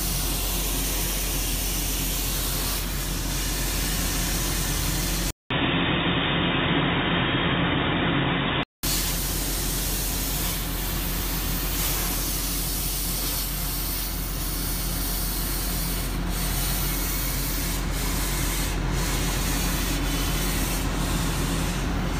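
From 5.30 to 8.83 s the sound turns dull and boxy, with nothing above 3.8 kHz, then clears again. A 200 ms silence opens the change, and a faint new background noise appears while the level stays about the same. This is likely an input switched to a poorer device, such as a headset's call profile. The gap at the switch and the different noise floor set it apart from a codec simply narrowing its bandwidth on the same microphone.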